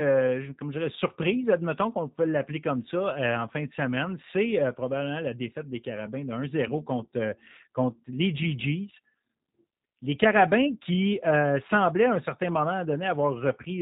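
From start to end, the speech carries plainly audible G.729 codec damage. Each 10 ms frame is rebuilt from a vocal tract filter, a pitch guess and a few pulses. Nothing above 4 kHz survives. The voice sounds muffled, rough and synthetic, which fits G.729A at 8 kbit/s.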